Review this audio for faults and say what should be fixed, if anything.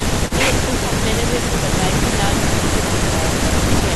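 Nothing should be fixed, since no faults turn up anywhere in the audio.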